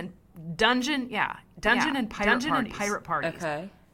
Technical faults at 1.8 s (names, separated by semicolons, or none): doubled audio track